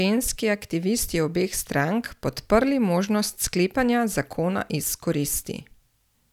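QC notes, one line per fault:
No faults were heard in the speech signal across the whole recording.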